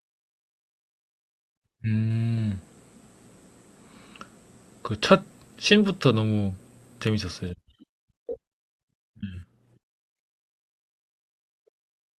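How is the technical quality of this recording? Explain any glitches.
No glitches or faults audible.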